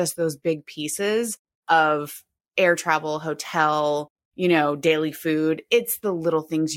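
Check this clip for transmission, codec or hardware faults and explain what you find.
No faults can be heard anywhere in this speech.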